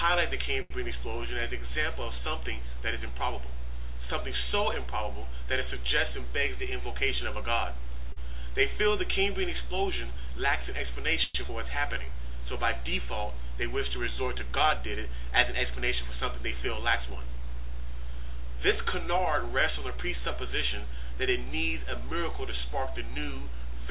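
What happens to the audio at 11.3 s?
From 11.24 to 11.37 s the last sound is stretched into a fading buzz or hiss, then resumes intact: a call audio freeze, likely a jitter buffer running dry while packets were delayed.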